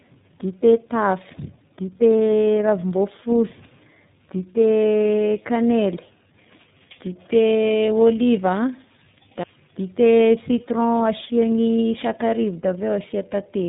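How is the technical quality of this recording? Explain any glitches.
The quality is poor throughout, with speech that sounds rough, muffled and warbly from start to finish, all caused by tandem speech coding.

Across the whole recording, nothing above 3.8 kHz survives, so the speech is dull and boxy. Its texture is grainy and wavering rather than steady. The speech passed through two speech codecs in a row, with a plain telephone-grade link between them. At each hand-off it was decoded and then compressed again, so the second coder had to model audio the first had already damaged. The errors stack, and the result is rougher and more warbly than either codec alone would sound. The character of the damage fits a chain that likely ran GSM full rate into iLBC.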